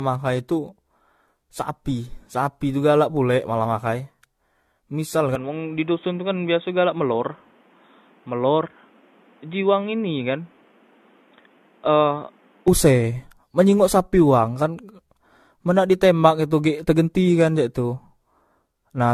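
From start to end the speech sounds swirly, smeared and hollow, with blurred attacks and nothing above 14.1 kHz, likely generation loss from around seven AAC passes at about 64 kbit/s. Between 5.35 s and 12.68 s the sound turns dull and boxy, cut off above 3.8 kHz, about 5 dB quieter, with new noise about 30 dB below. This is likely the input switched to a poorer device, with no gap at either change.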